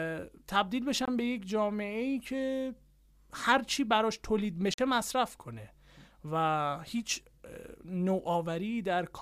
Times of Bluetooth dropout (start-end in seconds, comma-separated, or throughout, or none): 1.05-1.08, 4.74-4.79